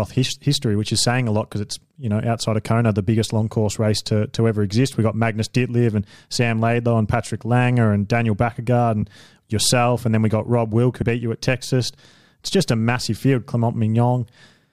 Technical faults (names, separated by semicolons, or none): compressed frames skipped